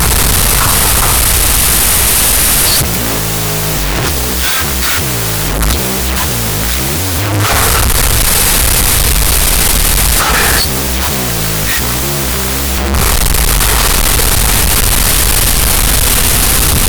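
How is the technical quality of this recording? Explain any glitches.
Poor, I'm afraid; the whole recording is compromised. Wrong sample width throughout: 16-bit data read as unsigned 8-bit, so every sample splits in two. Speech crawls at half speed, an octave low, buried in harsh noise.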